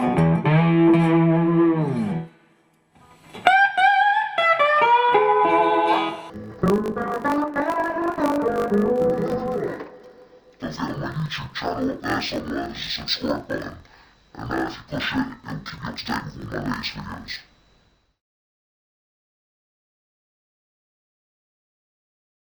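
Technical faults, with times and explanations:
6.30 to 22.50 s, interleaved audio read as planar: alternating left-right samples in each 20 ms block are split into halves that play together an octave down at half speed, so the sound turns dull and robotic, buzzing at the 50 Hz block rate.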